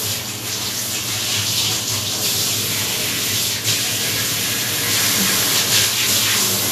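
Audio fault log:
Throughout, Vorbis compression: the sound is plainly hissy and grainy, with roughened tones, blurred attacks and nothing above 14.2 kHz. The likely cause is low-bitrate Vorbis coding, fitting roughly 37 kbps, whose coarse treble quantisation swaps fine detail for similar-energy noise.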